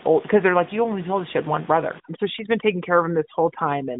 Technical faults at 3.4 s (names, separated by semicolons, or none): AMR narrowband mobile codec; overdone noise removal